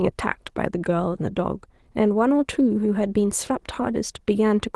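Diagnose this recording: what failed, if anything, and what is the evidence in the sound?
Nothing failed in this recording, and the sound offers no evidence of a fault at any stage.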